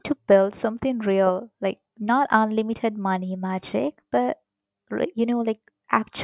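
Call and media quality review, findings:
No technical faults found: the speech signal holds steady throughout, with no audible defects anywhere in the recording.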